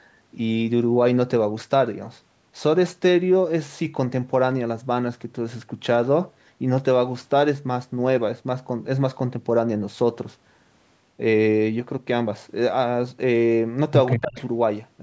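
Echo leak, from 14.09 to 14.41 s: a delayed copy of the speech arrives about 155 ms behind the original, roughly 10 dB quieter. The likely cause is a loudspeaker on the far end whose echo canceller let part of the microphone pickup travel back.

Speech suppressed in double talk, from 14.15 to 14.38 s: while the echo overlaps the talker, the speech drops sharply, by around 25 dB at its deepest, across about a fifth of a second, leaving the voice briefly sunken, likely as the canceller turns everything down.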